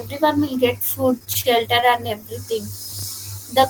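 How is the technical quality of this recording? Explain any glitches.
The recording has two glitches in the speech. From 1.19 to 1.89 s there are repeated stalls (stutter): six short waits, the longest 32 ms, are bridged by stretching the preceding sound, so the speech drags without losing anything. That continuation sets it apart from dropouts. From 2.89 to 3.14 s, processor overload crackle tears through the speech. About ten tiny buffers of roughly 3 ms each were missed and left silent, producing a hard-edged gritty crackle rather than smooth stuttering.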